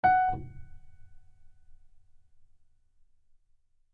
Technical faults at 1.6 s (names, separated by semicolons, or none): none